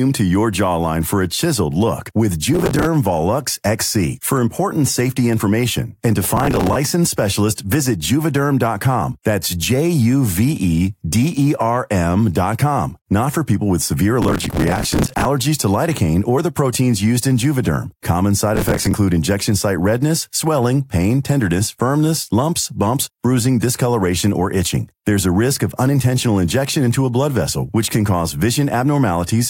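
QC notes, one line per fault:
2.54–2.85 s, processor overload crackle, after "a chiseled look with": a run of missed buffer deadlines, each slot of about 5 ms refilled with stale audio, so hard-edged repeats pile into gritty crackle.
6.37–6.76 s, processor overload crackle, between "safety information and to" and "licensed specialist visit": same tearing.
14.22–15.26 s, processor overload crackle, between "for people with severe" and "to lidocaine or the": longest burst, about a second, roughly a hundred misses.
18.56–18.94 s, processor overload crackle: same effect.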